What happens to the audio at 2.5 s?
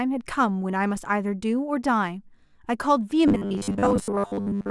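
Nothing goes wrong at 2.5 s; the speech runs straight through that moment with no dropout, click, distortion or other fault.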